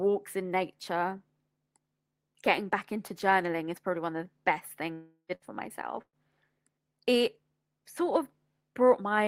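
This is a speech clip with gaps in its delivery. Just after "one of the best", from 4.93 to 5.32 s, the sound stretches into a fading buzz or hiss, then about 90 ms of silence. This is likely a long network dropout. Some 360 ms of speech never returns.

Two shorter bursts of packet loss follow, at 5.35 to 5.45 s and 6.02 to 6.16 s. Each time, the receiver holds the last sound and fades it. The second burst ends in about 60 ms of silence. About 60 ms and 120 ms of speech are lost.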